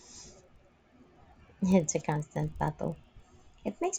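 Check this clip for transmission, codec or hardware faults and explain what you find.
There's one fault, and it runs through the whole clip: the resampler restarted on every block. Each 40 ms block was converted from 16 kHz to 48 kHz on its own, so every edge misses its real neighbours. That leaves a 25 Hz ticking buzz riding under the speech.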